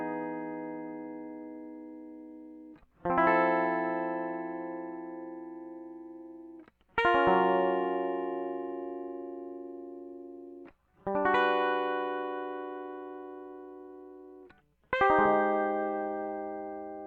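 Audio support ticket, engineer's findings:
No faults found in music.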